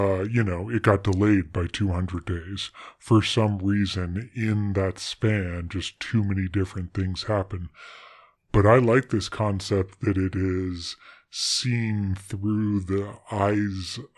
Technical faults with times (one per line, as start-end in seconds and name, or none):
0.00-14.17 wrong sample rate